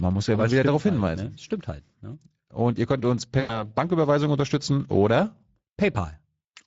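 A speech clip carrying plainly audible Speex codec damage throughout: the low excitation budget of this CELP coder leaves the voice noisy and hoarse, and the top band is a shaped noise-like fill rather than real detail, which fits a rate around 16.8 kbps. At 3.39 to 3.63 s, right after "ihr könnt uns", VoIP packet loss concealed by the speech codec is heard. The decoder repeats its last pitch and filter with falling gain, giving a fading smear consistent with about 100 ms of missing audio, and the voice stays weak briefly after recovery.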